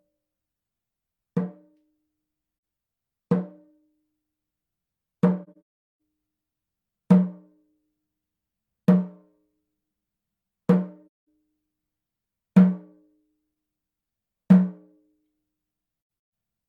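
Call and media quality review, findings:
AAC frame loss with muting. Soft-edged dropouts. 2.54–2.62 s, 85 ms hole. 5.43–5.86 s, broken run of gaps, longest near 0.4 s. 11.07–11.27 s, 213 ms hole. 13.50–13.55 s, 43 ms hole. 15.98–16.32 s, scattered gaps, longest around 150 ms. Decoder zeroes the spectrum of missing frames, and the overlapping windows fade out and back in. Gap lengths step in 43 ms units, which fits 1024-sample frames at 24 kHz.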